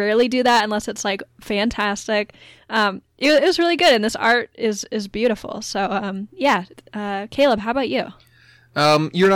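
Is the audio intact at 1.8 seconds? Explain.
No. The speech hard clips from 1.80 to 1.85 s. For about 50 ms the signal runs roughly 2 dB past what one stage in the chain can carry. The peaks in that stretch are sliced off flat. Those squared tops create new harmonics high in the spectrum. The overload is small and brief, so it comes across as a quick crackle on the loudest part of the speech rather than a sustained fuzz.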